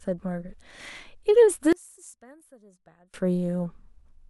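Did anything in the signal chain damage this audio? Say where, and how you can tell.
Yes. From 1.73 to 3.14 s the speech collapses by about 28 dB, leaving a faint residue rather than silence. That points to one channel inverted, likely a polarity swap in analogue wiring, cancelling centred content in mono. A dropout would not leave this faint remainder.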